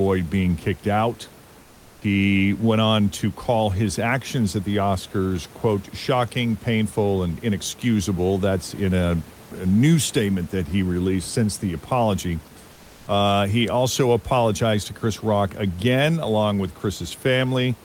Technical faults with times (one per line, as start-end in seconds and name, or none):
12.73-13.07 comfort noise in place of the background